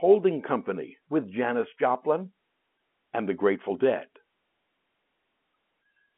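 No technical faults are audible.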